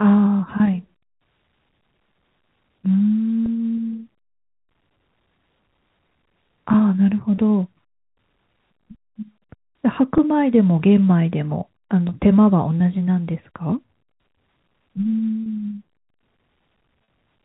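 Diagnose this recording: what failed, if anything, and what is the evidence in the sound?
Packet loss with pitch repetition at the network stage. Six brief gaps occur at 3.46, 7.36, 10.18, 12.09, 15.44 and 17.04 s, lasting 20, 20, 10, 20, 30 and 40 ms. The sizes fit 10 ms packets going missing. Each gap is bridged by looping the last pitch period, so the speech momentarily holds on a slightly buzzy tone. The 30 and 40 ms losses near the end stretch it longest, within the 4 kHz telephone band of the G.711 path.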